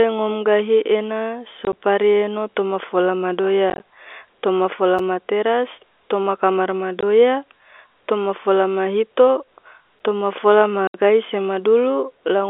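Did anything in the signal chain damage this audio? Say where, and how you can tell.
Yes. Packet loss filled with silence on the network: hard-edged dropouts at 1.65–1.73, 3.7–3.8, 7.01–7.03 and 10.87–10.94 s, in steps that fit 10 ms packets.

A gap between chunks at storage or playback: 6.5 ms holes at 4.99 and 9.99 s, every 5 s. This is silence inserted at each join, with no sound lost.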